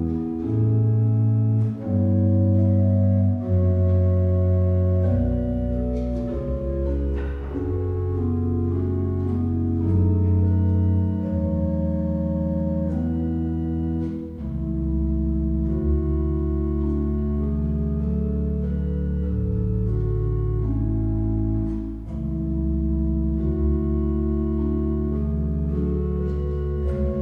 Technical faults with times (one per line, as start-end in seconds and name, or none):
none